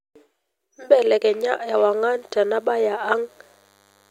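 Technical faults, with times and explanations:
1.67 s to the end: DECT cordless phone buzz, a thin, steady buzz at 100 Hz with a dense stack of harmonics, sitting roughly 40 dB under the speech. A nearby cordless handset or base emits a radio burst every 10 ms, which the audio circuitry rectifies into sound.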